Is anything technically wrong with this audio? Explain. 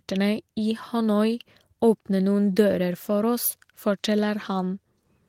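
No, nothing technically wrong turns up here; it's just speech coming through as it should, with nothing to flag.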